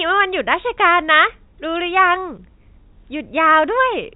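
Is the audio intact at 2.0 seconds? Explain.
Yes, the audio is intact at 2.0 seconds, with the speech passing cleanly through the G.711 telephone coding and its band limit near 3.8 kHz.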